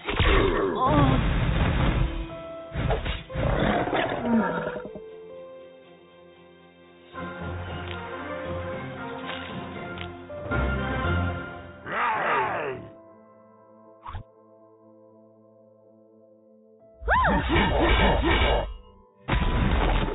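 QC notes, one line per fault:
No faults were heard anywhere in the audio. No QC line is logged for this clip.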